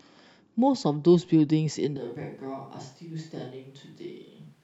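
At 1.97 s the speech turns abruptly hollow and roomy, about 10 dB quieter to the end. This is likely a switch to a distant microphone, not just a gain drop.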